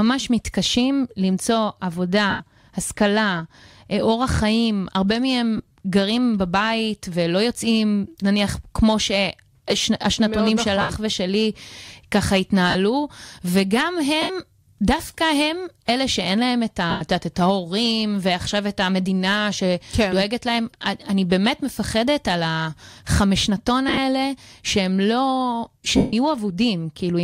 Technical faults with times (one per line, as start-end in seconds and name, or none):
2.30-2.40 lost LE Audio frames
5.57-5.74 lost LE Audio frames
10.81-10.90 lost LE Audio frames
12.70-12.75 lost LE Audio frames
14.22-14.30 lost LE Audio frames
16.90-17.01 lost LE Audio frames
23.88-23.98 lost LE Audio frames
25.97-26.13 lost LE Audio frames